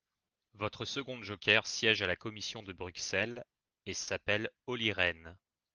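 From 2.97 to 4.09 s, packets reached the receiver late or more slowly than they were played, so its jitter buffer ran dry six times in quick succession. Each time, the receiver bridged the wait by extending the last sound, with the longest bridge about 50 ms. These repeated stalls (stutter) add roughly 140 ms of filler, about 13% of the stretch, with nothing lost. The speech drags and catches in a halting rhythm.

From 5.20 to 5.73 s, the jitter buffer was low on reserve, or had just raised its target delay, so the receiver rebuilt its cushion by repeating single pitch periods and slivers of pause. This jitter buffer slow-down adds about 55 ms, running the passage at 92% speed with the pitch unchanged. Sounds are slightly drawn out. Underneath, the call codec's band stops around 12 kHz, consistent with Opus at a modest bitrate.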